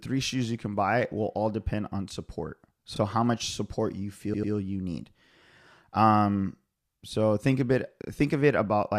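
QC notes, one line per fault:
2.96–2.99 s, repeated frames: right after "all depend on support", a 32 ms block plays twice, adding 32 ms and a small stutter.
4.34–4.53 s, repeated frames: after "how much support you", a 96 ms block plays three times in all before "you need", a stutter that adds 192 ms.
8.02–8.08 s, repeated frames: after "so think a", a 32 ms block plays three times, a quick double stutter, adding 64 ms.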